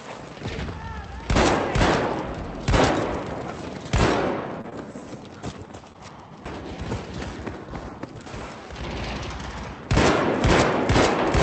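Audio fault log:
4.61–4.66 s, 4.70–4.73 s and 5.93–5.96 s: short concealed packet loss. Roughly 20 ms of audio failed to arrive each time, and the receiver bridged each gap by extending the preceding sound before easing back into the real signal. The result is a brief smear or wobble rather than silence, which separates it from a dropout or a click. Around it, the Opus call path's top end stops near 8 kHz.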